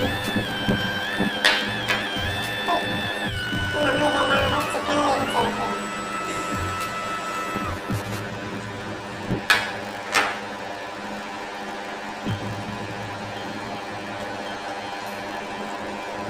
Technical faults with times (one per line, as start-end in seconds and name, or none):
0.00-16.30 planar audio read as interleaved